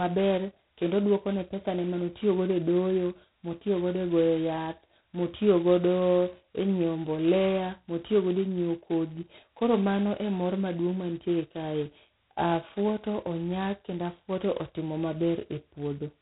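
From start to finish, the speech runs through G.726 ADPCM, and the damage is heavy. The codec sends only a coarse guess at how each sample differs from a running prediction, so with so few bits per sample the error piles up as a harsh, rasping hiss that rises and falls with the talker's level. That roughness fits the 16 kbit/s mode. Nothing gets through above about 3.9 kHz, leaving everything dull and telephone-narrow.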